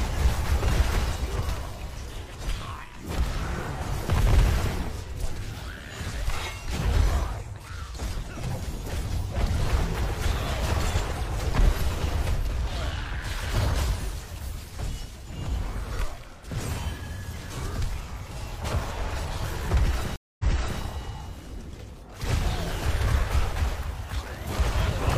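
At 20.16 s the connection drops and the player has to reconnect, then start a new decoder partway through the stream, which causes a stream reconnect. The audio goes silent for about 0.23 s. When it returns, it picks up about 0.42 s earlier than where it cut out, so a short stretch of sound plays a second time, with the disturbance over by 20.81 s. The first moment after the gap is muted or fades in as the fresh decoder starts up.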